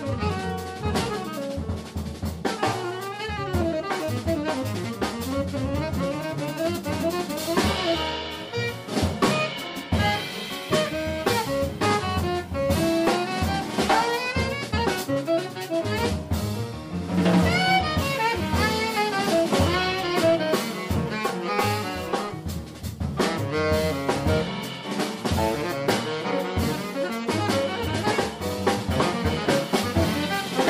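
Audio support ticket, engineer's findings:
No audible faults found on review. Nothing to attribute to any component; ticket can close with no action required.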